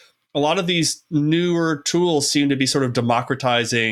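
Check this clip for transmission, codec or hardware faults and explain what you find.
Listening to this speech recording, nothing stood out as a transmission, codec or hardware problem.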